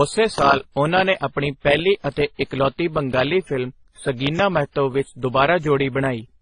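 This speech clip has a loud pop from 0.38 to 0.41 s, roughly 15 dB above the speech, just before "ਉਹਨਾਂ ਨੇ ਆਪਣੀ ਪਹਿਲੀ", likely a switch, plug or static click. Throughout, there's transcoding between lossy codecs, with stacked artefacts and nothing above 9.8 kHz, which points to a low-bitrate AAC, WMA, AAC chain.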